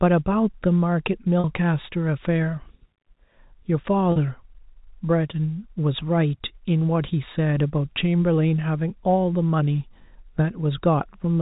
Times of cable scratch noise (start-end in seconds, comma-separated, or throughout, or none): none